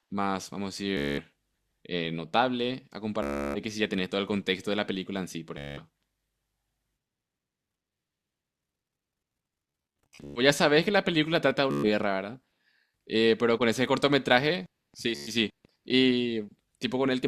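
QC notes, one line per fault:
0.97–1.20, 3.23–3.62, 5.58–5.80, 10.03–10.40, 11.71–11.89, 15.15–15.34 s: Bluetooth stutter. Packets were lost or late, so the receiver replayed its last slice, which fits slices of about 14 ms. The result is a buzzing stutter lasting 112 to 420 ms. The 10.03 s burst is broken up. Sound resumes further on each time.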